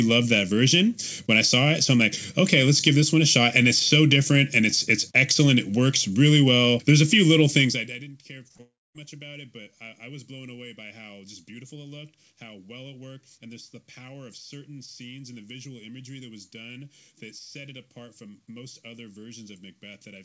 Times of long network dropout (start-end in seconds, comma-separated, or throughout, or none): 8.61-9.03